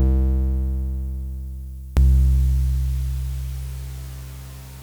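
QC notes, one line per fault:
0.00–1.97 s, one channel inverted: the opening of this music sounds as though one stereo channel has likely been flipped in polarity. When the two channels are folded to mono, everything they share cancels, so the level drops by about 23 dB and the centred body of the mix nearly disappears. What survives is only the difference between left and right, a faint residue of the music.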